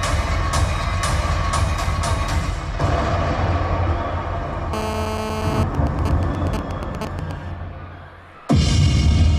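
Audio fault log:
4.73–5.63 s, GSM phone buzz: a hard, raspy buzz at 217 Hz sits on top of the sound, about 6 dB below it, with a dense stack of harmonics that has nothing to do with the material. A 2G phone close by was in a call, firing radio bursts 217 times a second. Something in the audio chain rectified those pulses into a square-ish waveform, and it stays nearly steady for the whole 0.9 s stretch.
5.75–7.31 s, GSM signalling bursts: right after the steady buzz, the interference breaks into even ticks with a longer 217 Hz buzz twice a second, a little below the level of the sound. Same phone, still in the call, but its user had gone quiet, so the handset only sent short groups of bursts instead of a continuous stream. The circuit rectified each group, which gives that choppy, rhythmic pattern for about 1.6 s.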